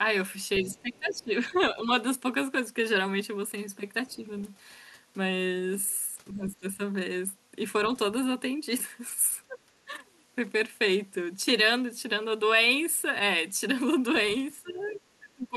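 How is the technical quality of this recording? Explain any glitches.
The recording has two recurring echo-control problems that surface at five points.

Other side's voice leaking through appears from 0.55 to 1.61 s, 4.09 to 4.44 s, 6.46 to 6.55 s and 14.67 to 15.0 s. The likely cause is an echo canceller that left part of the loudspeaker playback in the microphone signal. A second, fainter voice sits behind the main talker, roughly 20 dB down in the first stretch and much quieter, around 25 to 35 dB down, in the later scraps.

Speech suppressed in double talk occurs from 0.63 to 1.9 s, 6.33 to 6.79 s, 9.48 to 9.93 s, and from 14.54 s to the end of the clip. The likely cause is the echo canceller failing to separate the near talker from the returning echo and attenuating both. The talker's voice sinks by about 10 to 20 dB in places, most deeply at the end, and the dips span roughly a second in the first and last stretches and only brief fragments in between.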